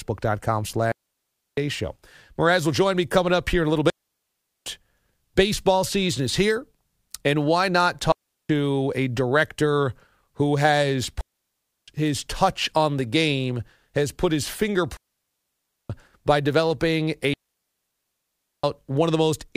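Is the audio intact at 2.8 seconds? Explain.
Yes, the audio is intact at 2.8 seconds, with no technical fault at that moment.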